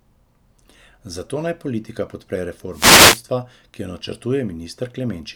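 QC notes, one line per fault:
2.71–3.24 s, wireless microphone noise hit: right after "naj politika podpre" a burst of static and swish washes over the speech for about half a second, then clears. The FM radio link from the microphone dropped into a fade where reflected paths cancelled the direct signal, so the receiver's own hiss surged up until the carrier strength recovered.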